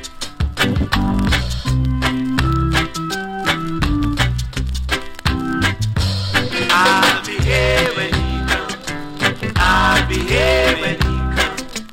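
No technical faults can be heard at any point in the clip, so there is nothing to place in time order.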